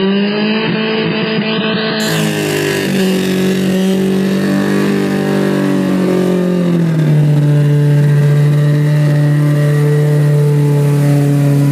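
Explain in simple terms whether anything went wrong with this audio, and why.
Adaptive stream starting at a low bitrate, 0 to 2.0 s: the player began with a low-quality version, so the sound is dull with nothing above 5 kHz, then suddenly clears up.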